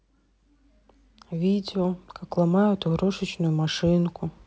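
There are no technical faults to describe at any point in the speech, which comes through G.722 wideband telephone coding at 64 kbit/s with the band up to 7 kHz intact.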